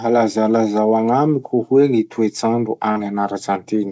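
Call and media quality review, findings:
Short concealed packet loss, 2.92 to 2.99 s: about 40 ms of speech late or missing at the decoder, gap filled by extending the preceding sound, then crossfaded back. Brief smear and wobble, possible lost consonant. Band stops at 8 kHz, fitting wideband G.722.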